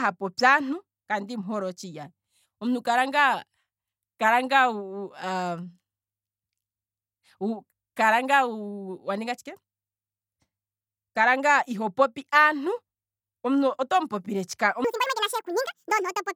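Speech whose last stretch, from 14.84 s to the end at 16.35 s, is a section at the wrong speed: it runs 1.76 times fast, pitch jumping about ten semitones, likely from a clock mismatch. Spectrogram harmonics leap upward and widen; waveform cycles visibly compress.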